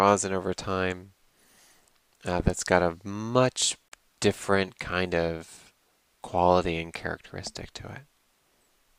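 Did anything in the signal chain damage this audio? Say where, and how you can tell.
Yes. There's a gap between stream segments, so this happened where the segmented stream got stitched back together for playback. At 3.88 s the sound just drops into dead silence until 3.92 s, a hole of about 34 ms with hard edges on both sides. Nothing is missing around it; the timestamps of two consecutive 6 s segments didn't quite meet, so the player padded the difference with silence, and the clip runs 34 ms longer.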